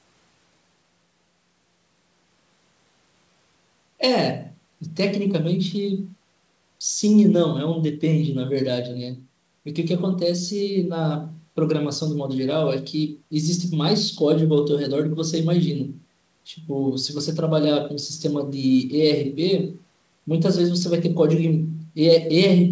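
Nothing's actually wrong with this speech recording; it just carries the ordinary sound of a call, with the bass trimmed by the microphone processing and nothing above 8 kHz, which fits a wideband call codec like G.722.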